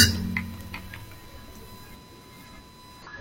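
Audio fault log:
throughout: USB whine, a steady 1 kHz tone sitting around 20 dB under the speech, from USB bus current in 1 ms frames leaking through power or ground.
3.02–3.07 s: damaged data in a compressed stream, a brief glitch as corrupted frames throw the decoder off and it hunts for the next valid frame header.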